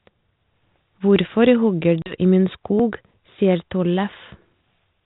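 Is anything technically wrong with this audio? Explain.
Yes, there are two faults. At 2.02 to 2.15 s there is packet loss on an ADPCM call. About 40 ms of audio drops to silence, roughly two packets' worth. The decoder's predictor then falls out of step, so the speech comes back with brief distortion.

At 2.8 s, about 20 ms of audio is missing between chunks. It is heard as a small jump in the speech, likely a gap left as the recorder switched between two-second chunks.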